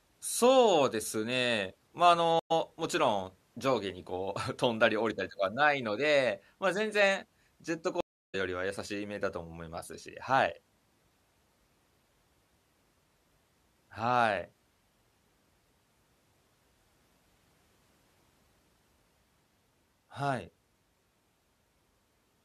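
At 2.39 to 2.52 s and again at 8.01 to 8.35 s the speech cuts out (108 ms, then 331 ms) and comes back from a new decoder with a soft, faded-in onset. Both are stream reconnects. The connection dropped and the player rejoined the live stream further on, so the speech resumes roughly 70 ms and then about 300 ms later than where it stopped. That missing material is what separates them from simple dropouts, which pause the audio without skipping any.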